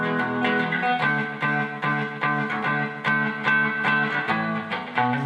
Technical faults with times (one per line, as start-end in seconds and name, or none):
none